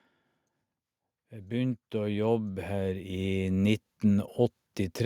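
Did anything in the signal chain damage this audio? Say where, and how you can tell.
Yes: automatic gain rising from 1.29 to 4.2 s in call processing; the AGC judged the speech too quiet and ramped gain about 12 dB, lifting voice and background together.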